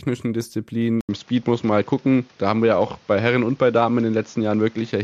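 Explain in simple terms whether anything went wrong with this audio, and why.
The recording likely switched to a poorer microphone, an input switched to a poorer device, at 1.01 s: after a brief gap, the speech sounds duller, slightly different in level, with faint new background noise.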